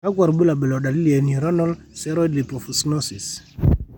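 Speech recording, with no technical fault to be heard anywhere in it. Nothing in the sound points to a problem in how it was captured, processed or played back.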